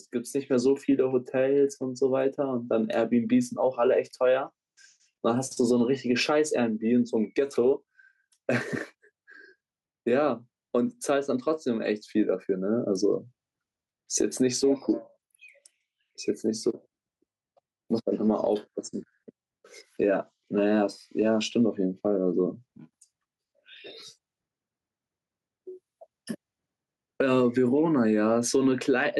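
A speech recording with gain pumping from start to finish: the gain swings by around 10 dB as loud sounds pull it down, so the quiet and loud passages sit unnaturally close together and the sound feels squashed. The likely cause is a microphone gain set far too high, with a fast limiter or compressor clamping down on each loud sound. On a waveform, peaks look flattened to a near-constant ceiling.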